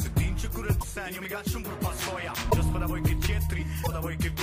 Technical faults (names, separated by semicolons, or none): broken MP3 bit reservoir